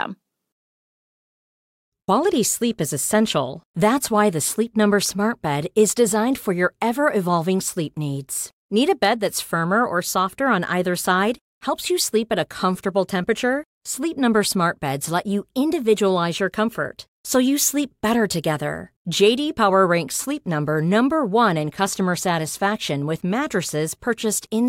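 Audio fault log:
No faults are heard in this speech clip.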